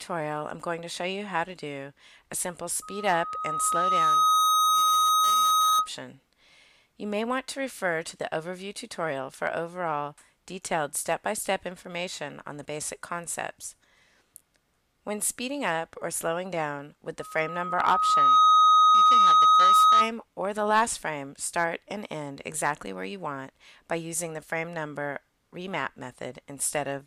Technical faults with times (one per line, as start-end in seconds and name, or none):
2.82-5.89 loudspeaker feedback squeal
17.19-20.12 loudspeaker feedback squeal